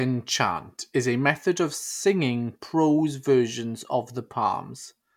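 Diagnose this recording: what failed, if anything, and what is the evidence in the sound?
Nothing in this speech recording points to a failure at any stage of the chain, from wiring and conversion through to storage and playback.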